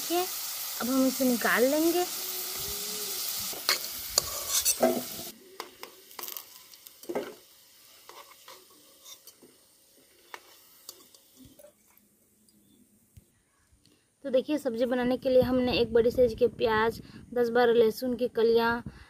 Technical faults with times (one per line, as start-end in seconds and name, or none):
none